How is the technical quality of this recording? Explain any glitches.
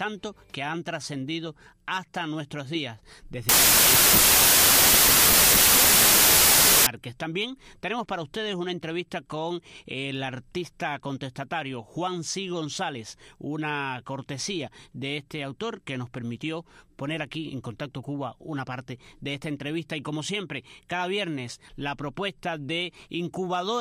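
Wrong sample width from 3.49 to 6.87 s: packed 24-bit samples are read as 32-bit, so each value mixes bytes from neighbouring samples. Loud noise swamps the buried original, which plays about 1.33 times too fast and too high in pitch.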